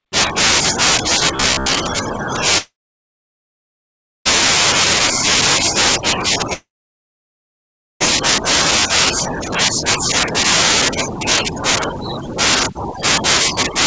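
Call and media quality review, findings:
Robotic sound from repeated short buffers, 1.36–1.72 s: rigid metallic buzz near 67 Hz riding on speech. Likely late packets, jitter buffer looping roughly 15 ms chunks; about half the audio replayed, rest skipped. Unlike a dropout, the rough speech contour continues.

Long network dropout, 2.58–4.27 s: brief decaying fill, then about 1.55 s silence; 1.68 s of audio never played, speech resumes further on. Same at 6.53–8.02 s, about 1.36 s silence, 1.48 s lost. Concealment fades out instead of buzzing throughout. G.722 path, band-limited at 8 kHz, carries the surrounding audio.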